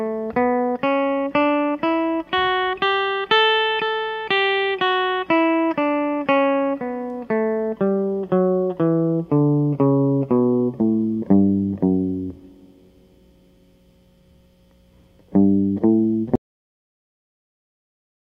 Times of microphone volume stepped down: none

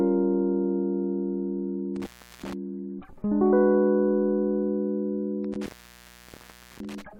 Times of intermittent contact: 1.96-2.53, 5.44-7.02

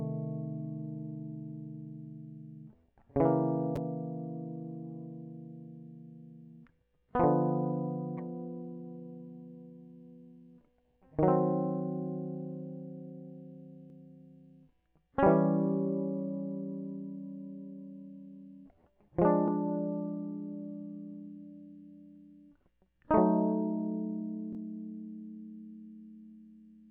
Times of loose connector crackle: none

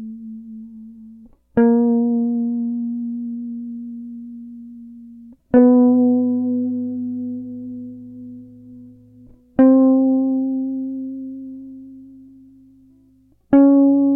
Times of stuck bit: none

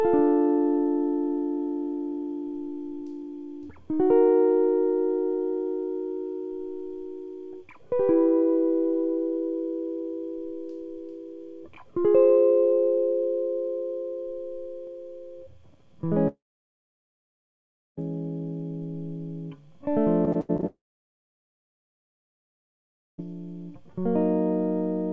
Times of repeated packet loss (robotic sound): 20.25-20.64

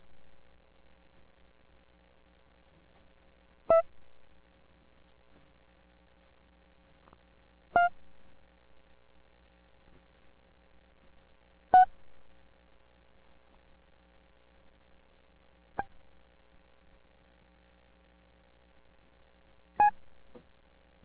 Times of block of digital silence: none

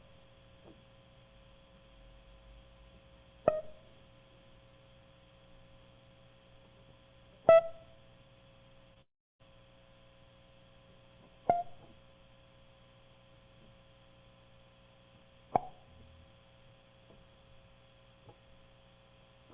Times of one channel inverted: none

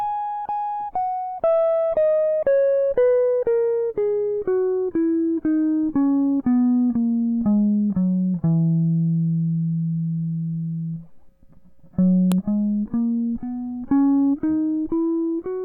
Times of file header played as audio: 12.32

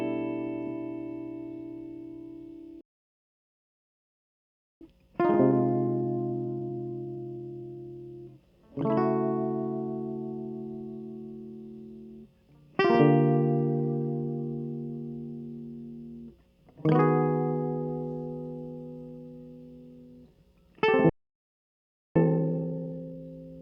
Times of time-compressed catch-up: 4.81-7.81, 22.16-23.22

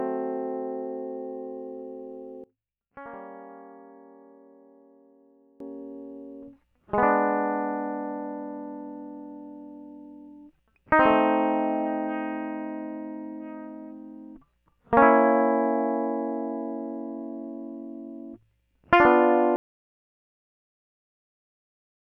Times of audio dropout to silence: 19.56-22.07

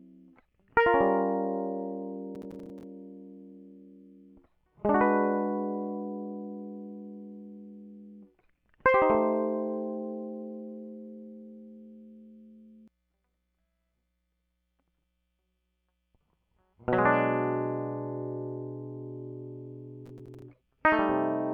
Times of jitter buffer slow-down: none

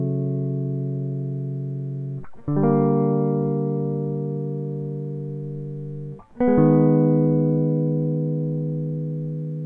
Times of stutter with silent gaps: none

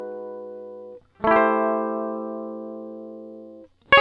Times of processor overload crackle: none

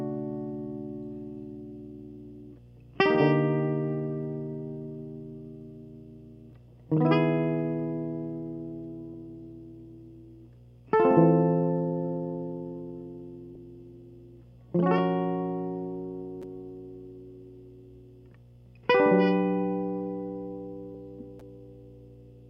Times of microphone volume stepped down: none

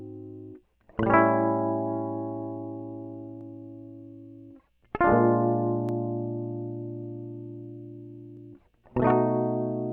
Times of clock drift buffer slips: 0.92-8.37

